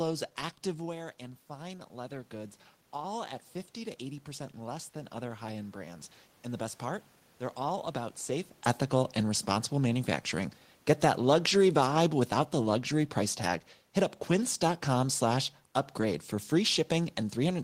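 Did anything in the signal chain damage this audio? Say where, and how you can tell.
Yes. Automatic gain rising, from 0.64 s to 7.11 s, in the call-processing stage. The speech level drops by about 10 dB around 1 s, as the talker moves back from the microphone. The gain control then treats the input as too quiet and slowly adds about 8 dB over the next six seconds. The tell is that the room noise swells along with the voice, which shows a gain stage acting on the whole signal rather than the talker changing level.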